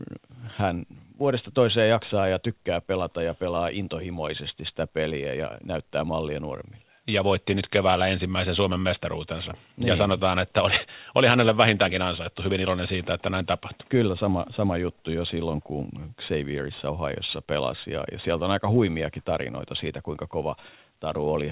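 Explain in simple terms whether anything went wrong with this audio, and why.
Nothing went wrong with this audio; it sounds as speech normally does after passing through a phone-style call connection.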